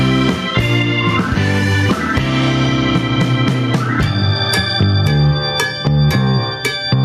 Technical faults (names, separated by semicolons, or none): gain pumping